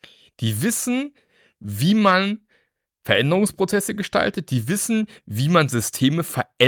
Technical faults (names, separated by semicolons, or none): clock drift between sender and receiver; repeated timing corrections